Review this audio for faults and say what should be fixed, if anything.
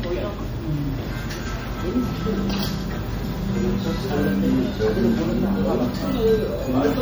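MP3 compression damage is plainly audible across the whole clip, from start to end. The sound has a watery, swirling quality as weak frequency components drop in and out from frame to frame, and sharp attacks smear. Content still reaches about 21.5 kHz, so this is not simple band-limiting, which would only dull the top end without the swirl. The artefacts fit a low bitrate around 48 kbps, the likely cause. To prevent it, keep a lossless or high-bitrate master and encode once at an adequate rate.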